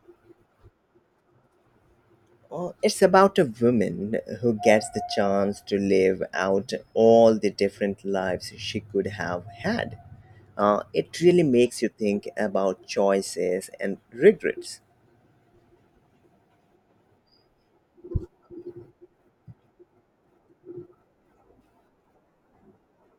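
No technical faults can be heard at any point in this speech recording.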